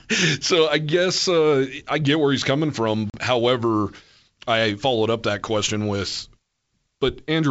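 At 3.10 s, just after "get where he's coming", the speech cuts to a hard-edged 40 ms silence, about two packets lost: packet loss on an ADPCM call. Until about 3.17 s the decoder's predictor and step size disagree with the sender's, so the speech returns slightly distorted before settling.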